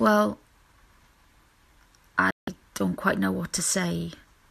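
At 2.31 s the speech drops out and stays silent until 2.48 s, a hole of about 0.17 s before the programme resumes mid-stream. This is a digital broadcast dropout: the receiver either lost the signal or rejected incoming frames that failed their checksum, so it muted its output until valid frames arrived again. The 168 ms of audio sent during that stretch is simply gone, which fits roughly seven lost frames.

At 3.57 s there is a very brief freeze. The waveform flattens for about 2 ms before live sound returns, a sign of an underrun with held sample. The output buffer ran dry, and the converter kept outputting its last sample value until new data came in. Because a couple of milliseconds of incoming audio were skipped rather than resumed, the waveform jumps when the buffer refills.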